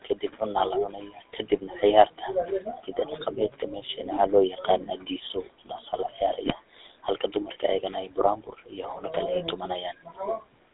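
From start to finish the speech carries a GSM full-rate codec sound, that buzzy, gravelly roughness of pulse-driven vocal-tract modelling, consistent with a 13 kbps GSM stream. The band runs only from about 250 Hz to 3.7 kHz, so everything sounds thin and boxed in.

From 0.04 to 4.01 s, and again from 4.51 to 10.61 s, the noise suppressor is cutting into the speech, treating quiet bits as background. Soft consonants and word tails get pulled down by about 18 to 19 dB, swallowing around 2 s and then around 3 s of material. The room noise sits about 21 dB under the speech and gets ducked along with it.

Between 6.46 and 6.54 s, GSM bit errors show up as a short squawky, gargling burst. Flipped bits in the filter, pitch or gain values warp the spectrum for a moment, which fits roughly three corrupted frames.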